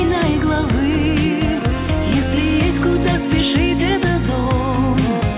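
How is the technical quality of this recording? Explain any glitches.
No glitches can be heard anywhere in the recording. It has passed through a call path, and the band ending at 4 kHz with nothing above it fits a narrowband G.711 mu-law link at 64 kbps.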